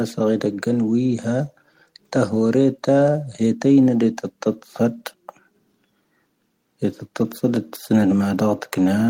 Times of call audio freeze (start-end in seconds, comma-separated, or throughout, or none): none